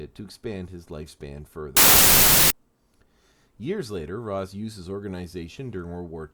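From 1.77 to 2.50 s, just after "to expand his lifespan", loud noise swamps a slowed, lower-pitched trace of the speech: a wrong sample width, which fits 24-bit samples read as 16-bit, at two-thirds speed.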